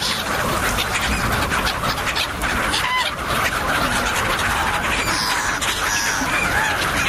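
Gain pumping runs through the whole clip: the level swings by about 10 dB, pulled down whenever something loud hits. It's likely an input set far too hot, with a fast limiter clamping each peak, so everything sounds squashed together.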